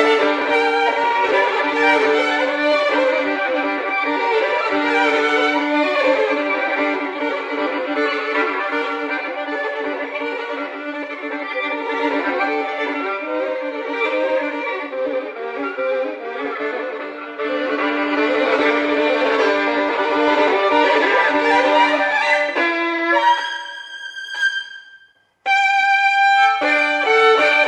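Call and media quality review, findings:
Nothing stood out on listening; no fault was heard at any point in the recording.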